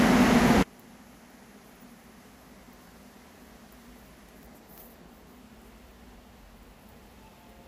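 An everyday-sound recording that, from 0.63 s to the end, drops about 31 dB in mono, collapsing to a faint residue, likely from one channel inverted cancelling shared content.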